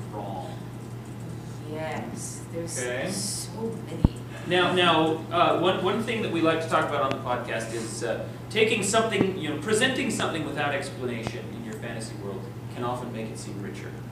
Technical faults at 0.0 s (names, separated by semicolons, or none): none